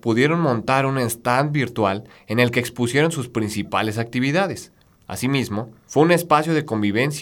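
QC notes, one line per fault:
No technical fault turns up anywhere in the signal, so there is nothing to log for it.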